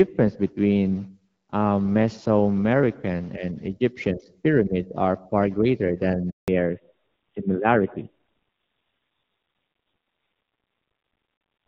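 At 6.30 s the speech cuts out into silence for 180 ms: a handover gap, where no speech frames arrived while the call switched networks. From 6.48 s onward the speech turns duller and rougher, with nothing above 4 kHz. This fallback to narrowband replaced the light HD Voice coding with an older narrowband codec, which sounds like roughly a 7.4 kbit/s rate.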